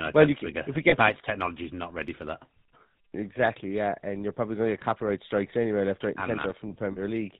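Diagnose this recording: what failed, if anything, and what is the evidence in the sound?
The whole speech clip carries GSM full-rate codec damage, introduced at the codec stage. The band stops at 4 kHz. The voice has a buzzy, gravelly roughness that never lets up, and it is plainly audible. The coder keeps a model of the vocal tract and excites it with a sparse, regular pulse train. Much of the fine excitation detail is thrown away. The result fits the 13 kbit/s full-rate scheme.

Loose connector crackle appears in the analogue wiring, from 6.39 to 6.51 s, straight after "anyway left right and". It is a short, irregular burst of scratchy crackle. A worn or dirty contact is making and breaking quickly as it shifts. Each break chops the signal. The burst lasts about 0.13 s, then the contact settles.

Lost GSM frames appear on the network side, from 6.92 to 6.99 s. For about 40 ms the sound hangs in a rough, metallic ring instead of moving on. 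That fits two consecutive 20 ms frames going missing. The decoder filled the gap by reusing the last good frame's settings. The gap is short, so the ring cuts off before it can fade fully to silence.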